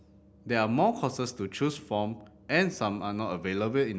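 No technical faults are audible anywhere in this recording.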